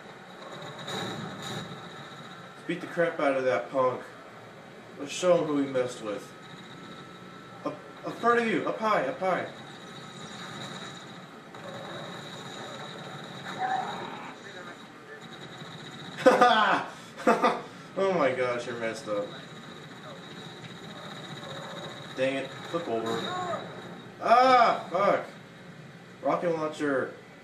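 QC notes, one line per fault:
1.60 s and 13.56–13.58 s, compressed frames skipped: at each point the audio jumps forward by roughly a tenth of a second, which fits about four lost 23.2 ms frames, either missing from the file or rejected by the decoder as damaged. Unlike a dropout, nothing falls silent; the sound simply resumes further on.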